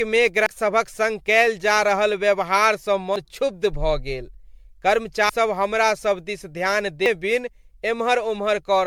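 Throughout this speech clip the sound is swirly, hollow and smeared, with blurred attacks. That is more damage than a single 96 kbit/s MP3 pass would cause, and it is likely generation loss from around ten rounds of decoding and re-encoding, each adding fresh quantisation noise and spectral holes. Sudden forward jumps occur at 0.46 s, at 3.16 s between "कयल जा रहल व्यवहारसँ" and "क्षुब्ध भऽ गेल", at 5.29 s just before "हमरा सब दिस ध्यान", and at 7.06 s just after it. Each skips roughly a tenth to a third of a second with no gap, likely dropped buffers (overrun), where samples were overwritten before being read.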